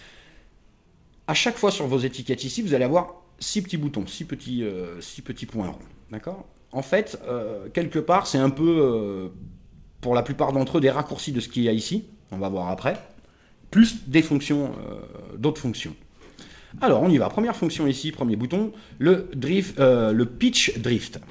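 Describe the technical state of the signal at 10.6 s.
At 10.6 s the signal is intact, with no dropout, glitch or distortion, only the call path's normal band limit, with nothing above 8 kHz, which fits a wideband codec such as G.722.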